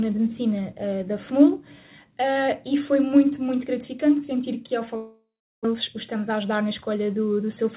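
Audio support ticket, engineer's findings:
Long network dropout, 4.96–5.75 s. Last sound stretched into a fading buzz or hiss, then about 0.37 s of silence; audio resumes with roughly 0.6 s lost. Likely packet loss on the network leg, with receiver concealment filling the gap before giving up.

Jitter buffer speed-up, 6.29–7.03 s. Audio runs 6% fast at unchanged pitch, sounds hurried. Receiver trimming slices of one or a few pitch periods repeatedly, about 50 ms total, to drain excess buffered delay.

Call path band-limited, nothing above 4 kHz, which fits G.711 mu-law at 64 kbps.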